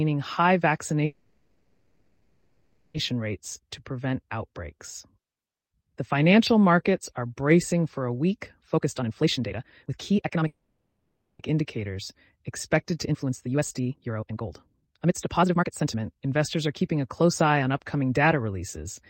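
From 1.05 to 2.96 s there is a call audio freeze. The last sound stretches into a fading buzz or hiss for 1.89 s. Nothing is lost. The audio resumes where it stopped, now running later. A stall in packet arrival is the likely cause.

After "bracing for a week", from 8.74 to 10.47 s, a jitter buffer speed-up plays the audio at 148% speed. Pitch holds steady but delivery sounds hurried. Repeated removal of pitch-period pieces trims roughly 0.7 s of backlog.

A second freeze runs from 10.47 to 11.41 s. It fills 0.92 s, ending in 0.11 s of silence. Then, from 11.51 to 18.03 s, the speed-up returns at 130%, cutting about 2 s.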